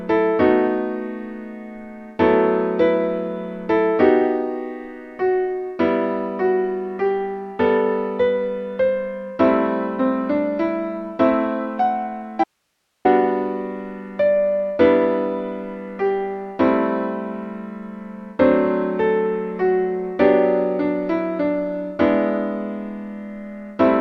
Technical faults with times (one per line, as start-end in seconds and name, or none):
12.44-13.05 audio dropout to a faint residue